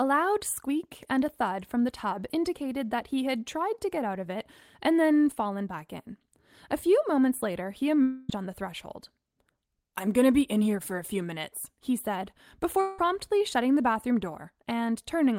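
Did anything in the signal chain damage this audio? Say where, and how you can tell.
Yes, at the network stage. From 8.02 to 8.30 s and from 12.81 to 12.99 s the speech turns into a fading buzz or hiss, then resumes with that stretch gone. This is likely a long network dropout, with the receiver extending the last sound over the missing audio.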